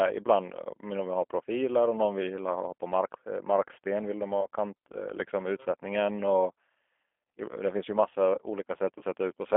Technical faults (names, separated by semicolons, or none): G.729 codec; VoIP packet loss concealed by the speech codec